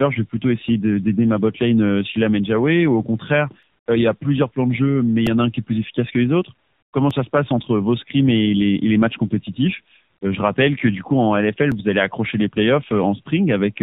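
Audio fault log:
Throughout: tandem speech coding. The speech sounds like it went through AMR-NB twice, with a G.711 hop in between, so the second coder is chewing on the first one's leftovers. That's why it sounds rough, muffled and a bit warbly, with nothing above 3.8 kHz.
3.63, 5.27, 7.11 and 11.72 s: repeated buffer. Each time a tiny slice of roughly 1.45 ms, which fits a 64-sample buffer, gets replayed one to three extra times. It's so short that you hear a click or brief buzz rather than a stutter, and hardly any audio goes missing.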